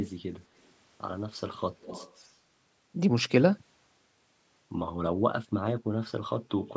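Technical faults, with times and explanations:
1.81–2.29 s, echo leak: a faint copy trails 208 ms behind, likely loudspeaker sound the echo canceller missed; one distinct repeat, unlike reverb's smooth smear.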